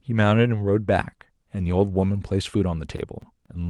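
Speech, with CD scratch ticks from 2.74 to 3.46 s: a disc blemish exceeds error correction once per revolution, so the player patches samples, leaving four brief ticks, the longest about 10 ms.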